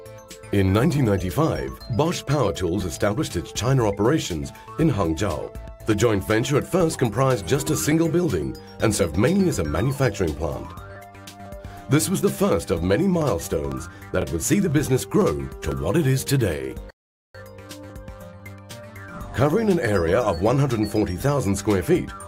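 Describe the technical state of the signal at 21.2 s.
Nothing is wrong with the signal at 21.2 s; the audio is intact at that moment.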